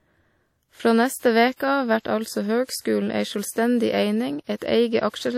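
From start to finish the speech carries a ringing, washy quality, with a hiss that swells and fades along with the voice, and nothing is heard above about 16.1 kHz. This is most likely WMA compression: the transform coder smears its quantisation noise over tens of milliseconds around each sound and drops weak spectral detail. The plainly audible damage and the hard top cut-off fit a low bitrate of around 48 kbps.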